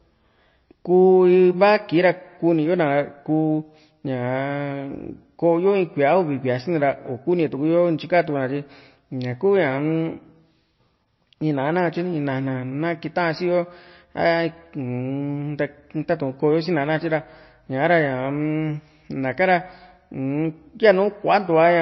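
Throughout the speech, the treble stops dead at about 5.8 kHz and there's a watery swirl on sibilants. That's likely MP3 compression at a starved bitrate, around 26 kbps.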